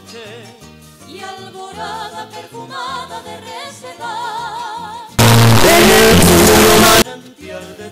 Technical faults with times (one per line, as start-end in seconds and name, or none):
5.19-7.02 signed and unsigned mixed up